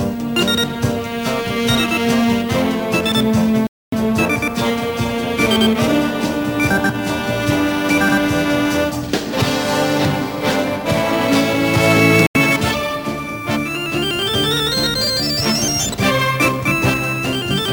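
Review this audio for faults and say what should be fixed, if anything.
The audio cuts to silence twice: from 3.67 to 3.93 s, and from 12.27 to 12.37 s. Each gap is likely a Bluetooth dropout. Packets reached the headphones too late and were thrown away. Output stayed silent until good packets arrived. Playback then picks up further along, as if it had kept running. To prevent it, keep the headphones close to the source and away from obstructions and 2.4 GHz interference.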